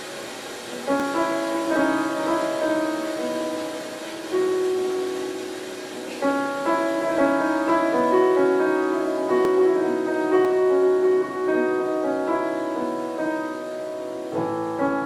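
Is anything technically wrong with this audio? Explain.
Yes. There are abrupt jumps at 1.0 s, 9.45 s and 10.45 s. Each is a jump with the sound skipping forward and no gap of silence. The cause is likely a dropped buffer (overrun): the software failed to read a block of samples before the hardware overwrote it, so the audio on either side was spliced together. The first two skips lose around 20 ms. The one at 10.45 s loses closer to 70 ms.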